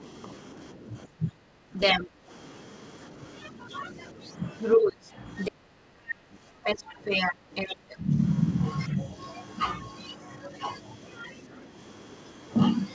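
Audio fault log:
Throughout: speech suppressed in double talk. The talker's level sinks repeatedly, at worst by about 15 dB, and parts thin out or break up. The likely cause is an echo canceller that, with both sides talking at once, couldn't tell the talker from the returning echo and turned both down.
1.74–11.34 s: other side's voice leaking through. A second voice runs alongside the talker for most of the clip and sits about 5 dB louder, most likely loudspeaker playback that the echo canceller failed to remove from the microphone.
12.90–12.94 s: other side's voice leaking through. A brief scrap of that far-end voice, roughly 25 dB below the talker, slips through at the very end. Like the rest of the call audio, it carries nothing above 8 kHz.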